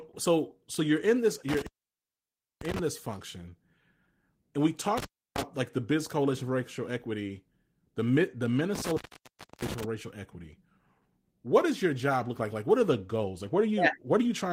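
Intermittent contact strikes at 1.49 s after "so you're in this", at 4.98 s after "and we", and at 8.75 s after "racial equity the the". Each time a loose connection opens, for about 0.95, 0.31 and 0.65 s, and the speech drops to faint hiss, with crackle as the contact breaks and remakes.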